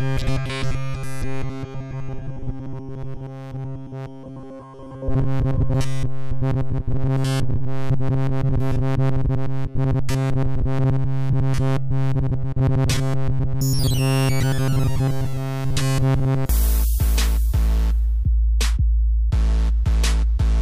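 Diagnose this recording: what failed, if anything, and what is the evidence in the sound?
Robotic sound from repeated short buffers, at the driver or buffer stage, runs from 0.01 s to 16.49 s, with essentially all of it replaced by repeats. A rigid metallic buzz at 134 Hz likely comes from one 7.5 ms buffer being replayed while fresh audio was skipped.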